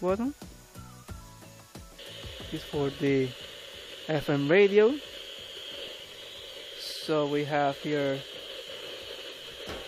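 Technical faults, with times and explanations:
3.91, 5.89 and 7.87 s: audio missing between chunks. Tiny skips about every 2 s, each a very short gap joined without silence, likely lost between processing chunks.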